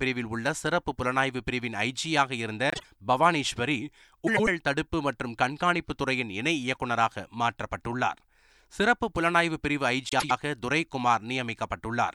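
Frames out of order at 2.70–2.85 s, 4.27–4.48 s and 10.09–10.31 s: neighbouring runs of frames, about 48 ms, then 96 ms twice, were swapped before decoding. Each stretch plays its halves exchanged, giving a brief garbled flutter, with no time lost.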